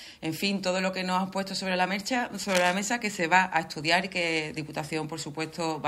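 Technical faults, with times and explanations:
2.49–2.74 s, cable scratch noise: a quarter-second of dense, ragged scratching at roughly 5 dB below the sound, likely from a worn connector whose contact resistance jumped as it moved.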